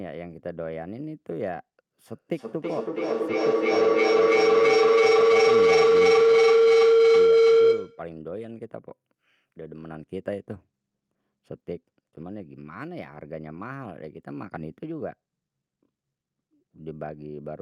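A speech recording with a feedback howl from 2.09 to 8.16 s: a microphone-to-loudspeaker loop keeps regaining level, building to about 16 dB above the speech near 500 Hz and pulsing roughly every third of a second. A spectrogram shows one bright horizontal band; the waveform swells into a pulsing block.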